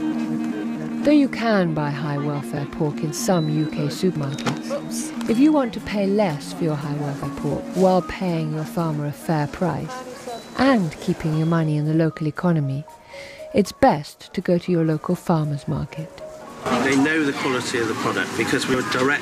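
At 4.16 to 4.44 s, at 7.22 s and at 18.56 to 18.74 s, the audio jumps forward where compressed frames were skipped: whole frames were either missing or rejected by the decoder as damaged, so about a tenth of a second of material is lost each time. Each join is heard as an abrupt step ahead in the sound.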